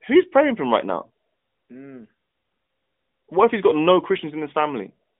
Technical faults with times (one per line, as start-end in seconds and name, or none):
none